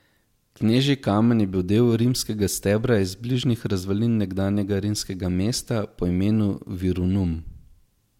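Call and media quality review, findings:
No audible faults found in the speech recording.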